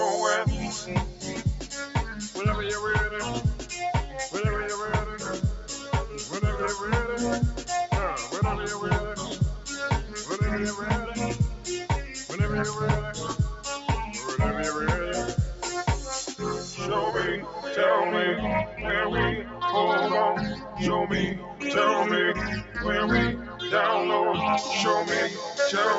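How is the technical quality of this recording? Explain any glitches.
The recording is held back by a speech noise suppressor that stays active throughout, and the audio tops out around 8 kHz from the call path's bandwidth.

A noise suppressor applied to music or sounds affects the whole clip. Built to separate a voice from background hiss, it misreads steady tones, ambience and decaying tails as noise and pulls them down by roughly 5 dB. Onsets slip through at near full level while whatever follows sags, so the sound pumps and thins instead of holding an even body.

Sound cut by the noise suppressor stands out at 1.10–1.43 s, 3.56–3.71 s, 19.43–19.61 s, 20.55–20.77 s, 21.38–21.62 s and 23.38–23.60 s. At each point the suppressor decided the material was noise and clamped harder than elsewhere, by about 6 to 9 dB, deepest at 21.4 s. Each dip lasts roughly 150 to 300 ms and sounds like a sustained passage or tail briefly ducking away before recovering.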